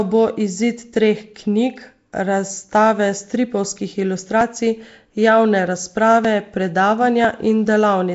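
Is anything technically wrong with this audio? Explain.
Yes. Throughout, the speech has a rough, hissy halo and smeared, underwater quality with nothing above 7.7 kHz, likely from Nellymoser compression starving weak bands of bits and filling them with noise.

At 4.41, 6.25 and 7.25 s, abrupt forward jumps occur, around 20 ms skipped each time, likely a dropped buffer (overrun) splicing the surrounding audio together.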